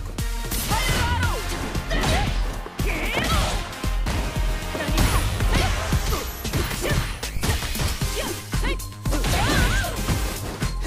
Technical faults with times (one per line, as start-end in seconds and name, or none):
7.37-7.51 phantom power thump